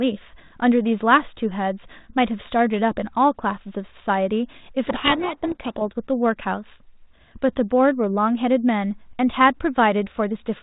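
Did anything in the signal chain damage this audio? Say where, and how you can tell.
Yes: a codec payload misread at the codec stage, 4.86 to 5.82 s. The speech drowns in harsh distortion, consistent with the G.726 code words' bit order being read backwards.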